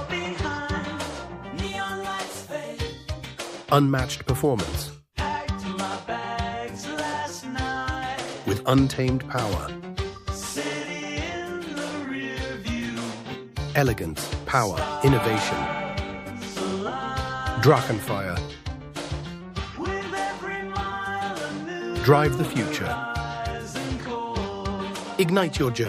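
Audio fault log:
Throughout: sample clock jitter. The converter's clock wanders, so each sample is captured a little early or late, with a timing spread of around 2 microseconds rms. A fixed timing slip causes a bigger amplitude error where the waveform changes fastest, so the resulting noise follows the audio, sitting roughly 40 dB below it. It comes through as a fine hiss or grit that thickens on loud, bright passages and disappears when the sound stops.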